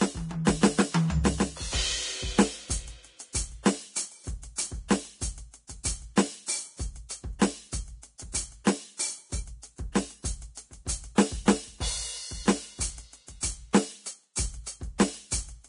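Vorbis compression runs through the whole music clip. It likely comes from heavy Vorbis coding at a low bitrate, around 32 kbps. Nothing remains above 10.6 kHz, and the coarsely quantised treble turns to grainy hiss. Tones sound roughened and attacks blurred.

Pre-echo occurs at 3.33 to 3.35 s and again at 8.64 to 8.67 s, lasting about 20 ms and 24 ms. In each case the codec spread its quantisation noise across a whole block, so a brief hiss fills the quiet just before a sharp attack, which then sounds soft and smeared.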